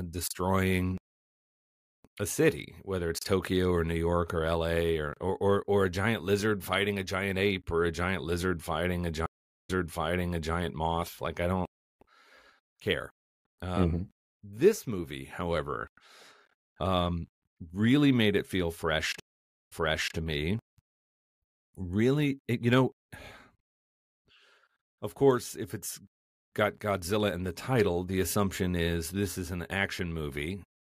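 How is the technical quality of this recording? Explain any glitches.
The speech gets interrupted twice by a stream reconnect. At 9.26 to 10.55 s, right after "giant lizard fighting a", the sound drops out for 400 ms and then picks up 888 ms earlier, so you hear a stretch again. At 19.20 to 20.15 s, after "made it feel fresh", there's 488 ms of silence and a 470 ms rewind before "to me". Both times the connection broke, the player restarted its decoder mid-stream, and the server resent a burst of audio it had already sent.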